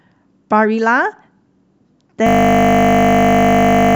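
At 2.27 s the speech stops and a system hang loop takes over to the end of the clip. The machine or its audio driver froze while the sound hardware kept replaying the same 20 ms stretch of its buffer, dozens of times over. That 50 Hz repeat rate turns into a steady, flat buzz. On a waveform the envelope goes level, one identical 20 ms cycle tiling the rest of the file. A spectrogram shows evenly spaced horizontal lines at multiples of 50 Hz.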